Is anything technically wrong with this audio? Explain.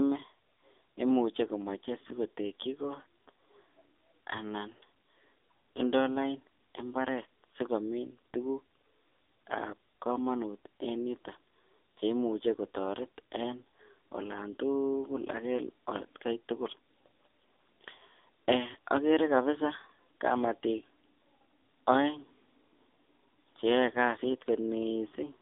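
Yes. AMR narrowband mobile codec damage runs throughout: the speech sits in a 150 Hz to 3.6 kHz band with nothing above 3.7 kHz, and the heavy buzzy, synthetic texture suggests a low bitrate near 6.7 kbps.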